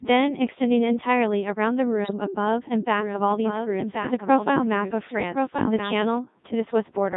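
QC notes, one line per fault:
Throughout, Codec 2 vocoder: The speech sounds robotic and buzzy, confined to a narrow band of roughly 150 Hz to 3.7 kHz, with heavy synthetic coloration on every syllable. At 3.2 kbit/s the codec transmits only pitch, voicing, energy and a coarse spectral envelope, never the waveform itself. The decoder then rebuilds the voice from a set of sine waves, which produces the mechanical, hollow timbre and strips away the natural texture of the original.
2.04 to 2.14 s, bit errors on digital voice radio: For about a tenth of a second the voice breaks into a brief warbling blip, with sudden jumps in pitch, level and tone colour. The length points to roughly four corrupted vocoder frames. Each frame's bits drive the pitch, loudness, voicing and spectral shape of the synthesised sound, so an error rate of a few percent scrambles those parameters and turns that stretch into garbled, bleeping gibberish.
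2.99 to 6.19 s, doubled audio track: A second, full-band copy of the speech runs about one second behind the original at roughly 5 dB lower. It has no reverberant tail or room colouring and switches on and off abruptly at the edges of this span, so it sounds like overlapping talk rather than an echo. The likely cause is the same signal being mixed in twice, either through a slower second capture path or an edit that left two copies out of step.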